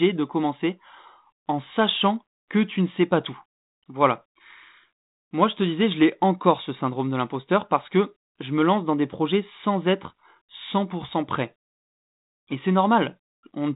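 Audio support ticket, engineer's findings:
No faults found in the speech; the G.726 ADPCM path at 32 kbit/s shows only light coding noise, in line with normal operation.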